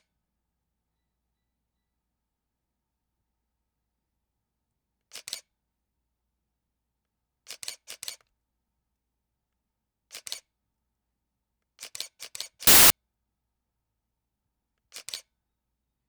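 An everyday sound recording in which, from 12.67 to 12.90 s, samples are built from the wrong bytes: the reader misaligns or swaps each sample's bytes, so the rapidly changing low bits become the loud part, turning that 0.23 s stretch into harsh, loud broadband noise.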